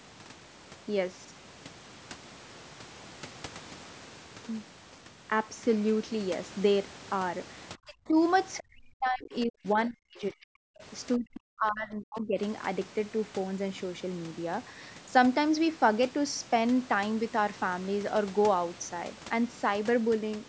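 From 7.76 to 8.17 s the speech sinks by roughly 30 dB, which is speech suppressed in double talk, likely because the echo canceller could not tell the near talker from loudspeaker echo while both sides spoke and so attenuated everything. The same happens more heavily from 8.66 to 10.77 s and from 11.17 to 12.38 s, with dips of around 40 dB that leave the speech turned down for a second or two at a time.

Between 8.58 and 8.63 s a brief scrap of the other side's voice leaking through appears, about 20 dB below the speech, likely residual loudspeaker echo that the canceller failed to remove from the microphone signal. It sits just before the longest suppression.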